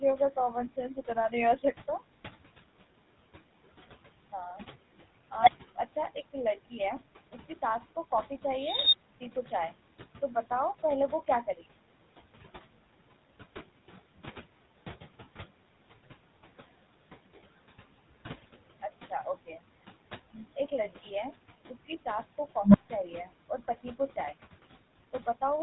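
Speech runs through a GSM full-rate codec for its whole length, and the damage is plainly audible. Every voiced stretch carries a buzzy, gravelly roughness from the pulse-train excitation, and nothing reaches above 3.9 kHz, so sibilants lose their edge. The texture points to full-rate GSM at around 13 kbps. Noise suppressor artifacts are also present throughout. The room's background noise, sitting about 18 dB below the speech, is pulled down by about 17 dB in the gaps and then swells back under each phrase. Between 0.94 and 1.33 s the suppressor also cuts speech, misreading quiet speech energy as noise. Around a tenth of a second of it in total is pushed down, by up to about 10 dB, so those sounds come across swallowed and faint.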